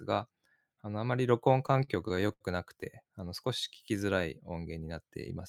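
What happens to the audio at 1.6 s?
Repeated stalls (stutter) run from 1.53 to 2.42 s: packets arrived late, the jitter buffer kept emptying, and eleven short gaps up to 76 ms were stretched over, so the speech drags without losing anything.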